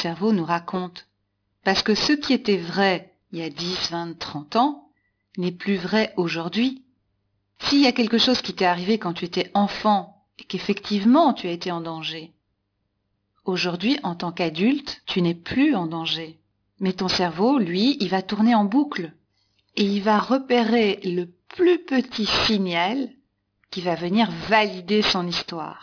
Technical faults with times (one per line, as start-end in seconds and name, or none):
0.00-25.82 aliasing